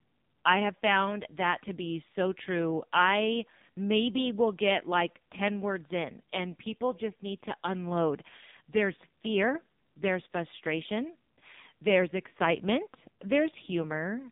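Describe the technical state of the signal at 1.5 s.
At 1.5 s the speech carries the AMR narrowband mobile codec damage present across the whole clip. Energy sits between about 150 Hz and 3.7 kHz with nothing above, and the voice is buzzy and synthetic because each frame is rebuilt from a vocal-tract model driven by sparse pulses. The damage is heavy, pointing to a very low rate near 5.9 kbps. A plain telephone band filter alone would narrow the band without this buzz.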